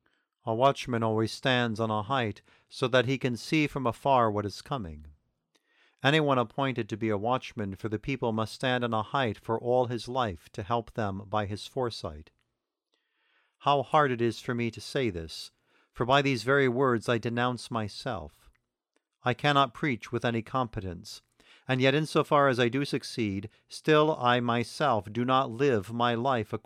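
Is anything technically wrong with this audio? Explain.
No, nothing is technically wrong.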